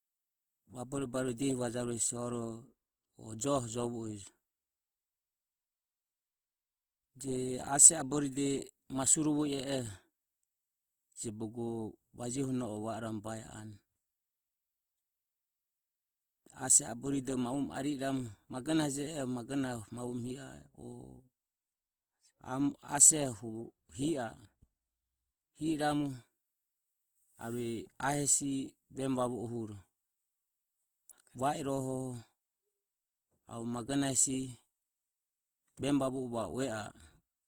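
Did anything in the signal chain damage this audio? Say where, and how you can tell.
Yes, at the codec: the speech turns rough and grainy throughout, likely Opus compression near 24 kbps in CELT mode, filling bit-starved bands with noise.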